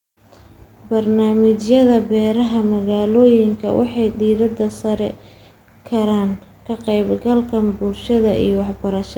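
No technical faults can be heard anywhere in this speech recording.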